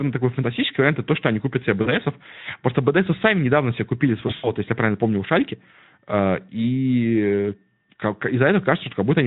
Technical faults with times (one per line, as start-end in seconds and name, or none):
1.81-1.93 VoIP packet loss concealed by the speech codec
4.27-4.52 VoIP packet loss concealed by the speech codec